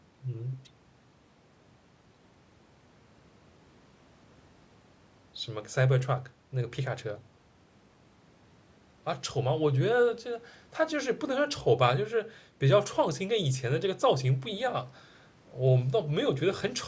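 Nothing stood out on listening to this speech beyond the ordinary character of call microphone processing, with the audio reaching no higher than about 8 kHz.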